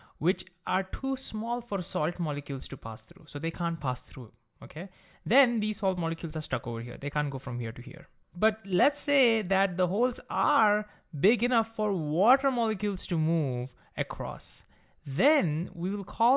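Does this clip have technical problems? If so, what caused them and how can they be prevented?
No, there are no technical faults in this clip to trace or prevent.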